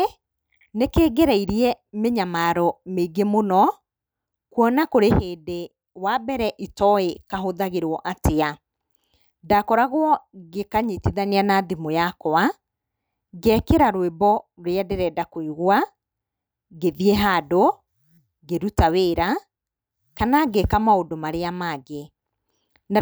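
No technical faults are audible.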